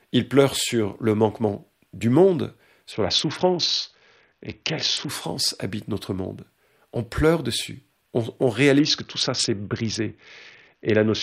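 At 2.92 s, right after "le manquement du monde", the speech goes dull and gritty until 5.09 s, just before "habite notre monde". It comes back at 8.79 s after "pleure dessus on" and runs to the end. That's a Bluetooth SBC bit pool drop, with the treble starved and the rest coarsely quantised, which fits a fall from bit pool 28 to 6, around 60 kbps.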